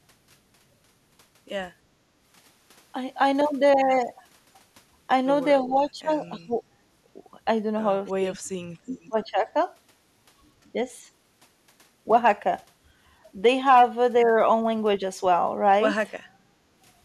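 An echo canceller likely unable to separate this talker from loudspeaker echo during double talk pulls the speech down, causing speech suppressed in double talk: it dips by roughly 20 dB at 5.63–6.62 s, cuts nearly out (around 40 dB) at 8.15–8.74 s, and sags by about 15 dB at 9.09–9.48 s. Later the canceller clamps the microphone while the loudspeaker plays, so the background is gated by the echo canceller, with the room sound dropping about 10 dB at 16.27–16.65 s before returning.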